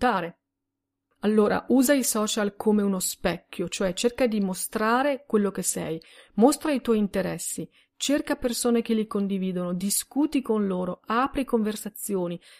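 No technical faults can be heard anywhere in this speech recording. Nothing in it stands out as a problem at any point.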